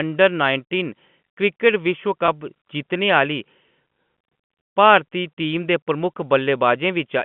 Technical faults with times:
2.26-2.28 packet loss with pitch repetition

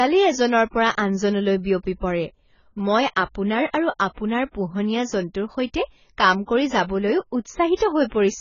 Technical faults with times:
0.00-8.40 AAC compression

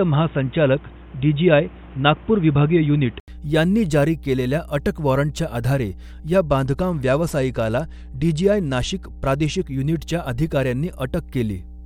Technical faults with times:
0.00-11.85 mains hum
0.00-3.28 input switched to a poorer device
6.35-9.62 Bluetooth SBC bit pool drop

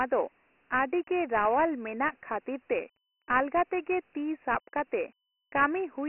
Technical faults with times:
0.00-6.09 Dialogic VOX ADPCM

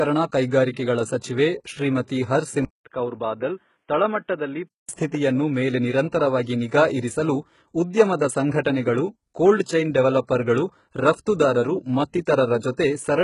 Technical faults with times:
0.00-13.24 HE-AAC compression
2.65-4.89 input switched to a poorer device

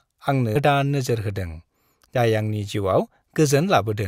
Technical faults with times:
0.55 compressed frames skipped
2.13-2.20 compressed frames skipped

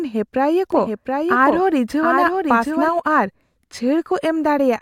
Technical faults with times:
0.72-2.88 doubled audio track

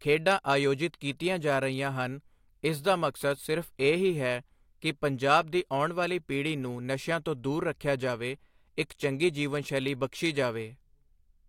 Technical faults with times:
none

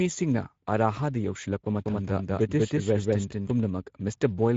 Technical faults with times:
0.00-4.57 Speex codec
1.86-3.52 doubled audio track

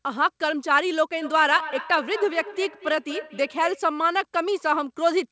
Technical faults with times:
1.17-3.92 feedback echo between two devices

